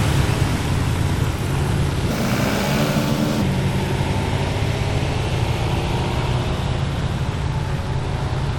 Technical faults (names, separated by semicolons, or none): section at the wrong speed